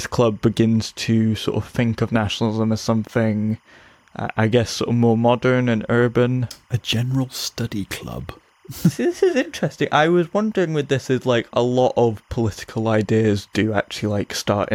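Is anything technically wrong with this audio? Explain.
Yes. Timecode bleed runs through the whole speech clip. A faint, steady chirping warble sits behind the voice from start to finish. It sits roughly 40 dB below the speech, so it is quiet but constant. Linear timecode from a nearby track or cable has leaked into this audio path. The code is a square wave flipping between two pitches, near 1 and 2 kHz. Its repeating rhythm fits 25-frame timecode.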